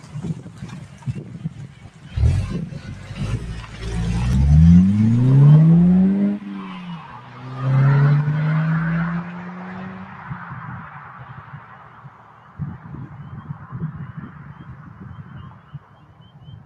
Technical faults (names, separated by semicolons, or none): noise suppressor applied to music or sounds